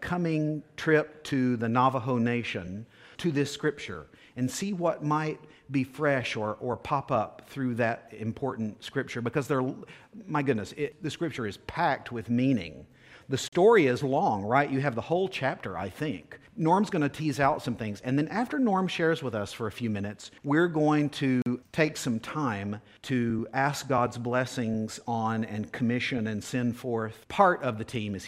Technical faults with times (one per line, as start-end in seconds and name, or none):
13.48-13.53 block of digital silence
21.42-21.46 block of digital silence